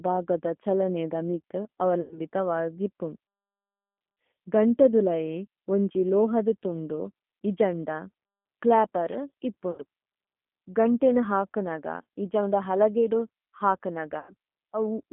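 Throughout, the speech passes through the G.729 codec at 8 kbit/s, held within 200 Hz to 3.4 kHz. Its pulse-built excitation makes the speech plainly rough and synthetic.

VoIP packet loss concealed by the speech codec occurs at 2.01 to 2.21 s, after "ബാഗദ ഛലനൈദ മിതു" and before "വാഗ് ഇപു", at 9.71 to 9.82 s, and at 14.19 to 14.33 s. Each time the decoder stretches its last frame into a buzzy tone or coloured noise that fades.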